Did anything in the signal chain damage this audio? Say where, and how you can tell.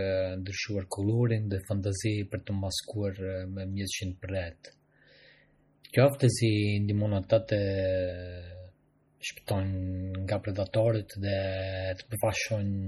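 Yes. MP3 compression damage runs throughout this speech clip at the codec stage. The sound is heavily watery and swirly, with nothing above 16.2 kHz, which fits a low bitrate around 32 kbps. An MP3 encoder is the likely cause: it zeroes weak frequency lines that flicker between frames and cuts the treble.

Pre-echo occurs at 9.47 s, also from the codec. A short hiss lasting about 16 ms comes just ahead of a sharp attack, which sounds smeared. The transform spreads its quantisation noise across the whole block, so noise meant for the loud onset fills the quiet moment before it.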